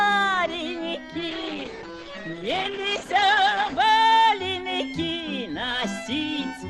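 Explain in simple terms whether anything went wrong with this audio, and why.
From 1.3 to 3.87 s there is a call bitrate drop: the connection squeezed the audio into far less data, so it turns rough and muffled before recovering.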